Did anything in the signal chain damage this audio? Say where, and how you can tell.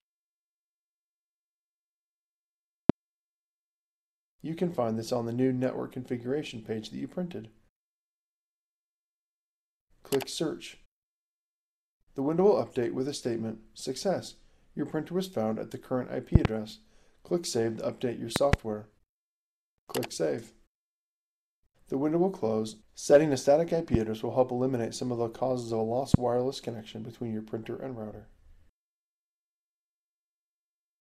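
Yes, loud pops, likely electrical transients entering the analogue path, at 2.90–2.92, 16.35–16.47 (two), 18.36–18.56 (two), 23.94–23.97 and 26.14–26.17 s, about 25 dB above the sound (about 20 dB at 23.94). Each appears as a sharp waveform spike and a full-height vertical spectrogram stripe, with the sound continuing underneath.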